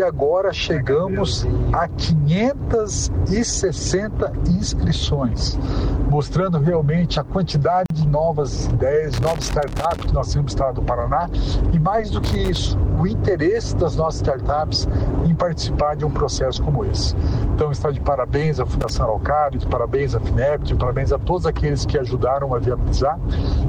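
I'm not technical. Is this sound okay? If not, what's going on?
No. At 7.86 s there is a gap at a join of encoded pieces: a 43 ms hole of silence where two separately compressed sections were stuck together without trimming the padding each one carries. The sound then resumes exactly where it stopped.

There is also loose connector crackle at 9.14 to 10.06 s, 12.24 to 12.56 s and 18.81 to 18.96 s. A worn or dirty plug contact briefly breaks and remakes the connection, chopping the signal into irregular bursts of scratchy crackle.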